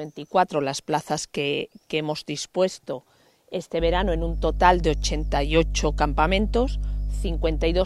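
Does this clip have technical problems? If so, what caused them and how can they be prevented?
Yes. Mains hum comes in at 3.78 s and runs to the end at 7.85 s. It is a steady low tone at 50 Hz, with some low harmonics above it. It sits only a little below the wanted sound, so it is plainly audible. The power line is leaking into the signal path, through a ground loop or from a nearby transformer. To prevent it, use a single ground point, balanced cables and ground-lift isolation, and keep cables away from transformers.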